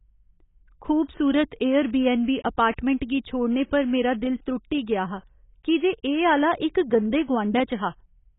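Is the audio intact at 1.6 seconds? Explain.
No. At 1.6 seconds the speech carries the same damage heard across the whole clip: it is dull and smeared, with nothing above about 3.8 kHz, and a warbling, fizzy texture on sibilants and held sounds. The likely cause is heavy AAC compression. The AAC-LC encoder starves the frequency lines of bits, which fits a bitrate near 16 kbps. A plain low-pass filter would sound clean but muffled. This has the unstable, swirling quality of coarse quantisation.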